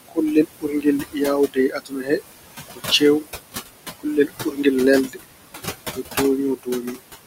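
Speech runs under room noise sitting about 11 dB below the voice, and a noise suppressor is working on it for the whole clip. Noise suppressor artifacts are present throughout: the background is pulled down by about 18 dB between phrases, then lifts again beneath each phrase. That pumping, gated texture is what separates it from plain room noise, which would keep a steady level and timbre regardless of whether anyone is talking. Speech cut by the noise suppressor appears at 0.08–2.21 s, 2.69–3.34 s, 3.97–4.65 s, 5.08–5.32 s and 6.56–6.97 s. Here the suppressor treats soft consonants and word endings as noise and turns them down by about 20–21 dB at worst. This removes roughly a second of sound inside the first span and a fifth of a second or less in each later one. The result is brief swallowed, faint patches within words, which is different from a dropout or codec gap: the level sinks smoothly with the background rather than breaking into silence or a click.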